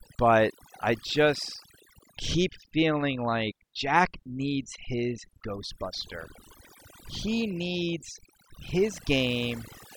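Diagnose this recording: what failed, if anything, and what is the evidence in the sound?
The background collapses to near silence dotted with twinkling specks throughout. This is overdone noise removal at the call-processing stage: a suppressor set too aggressively switches off frequency bands near its noise estimate, taking quiet speech detail with them.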